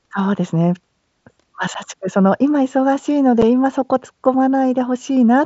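At 1.74 s the speech drops out for about 7.5 ms, which fits a single lost headset packet. The same thing happens again at 3.42 s. This is unconcealed Bluetooth headset packet loss. Audio between headset and phone travels in tiny packets. When one goes missing, nothing fills the gap, and silence takes its place. Each hole is brief and has hard edges. The link sounds like mSBC, with its light graininess.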